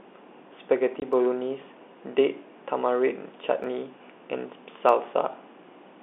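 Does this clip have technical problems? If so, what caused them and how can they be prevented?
Yes. At 1.00–1.02 s, a single 20 ms hole of silence from packet loss filled with silence cuts the speech with hard edges. Unlike a slip, it is an audible gap, not just a tick. Packet loss concealment and a jitter buffer would hide such gaps.

From 1.13 to 4.89 s, a click recurs about every 1.26 s, which points to clock drift buffer slips: a clock mismatch of roughly 150 ppm likely drops or repeats a handful of samples each time. Its strict regularity separates it from random packet loss. Locking both devices to one clock, or adding adaptive resampling, would prevent it.

The G.711 telephone band, roughly 250 Hz to 3.6 kHz, is heard throughout as the line's normal narrow sound.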